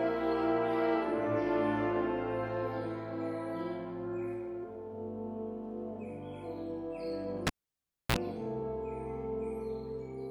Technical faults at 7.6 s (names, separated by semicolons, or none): cable pulled and plugged in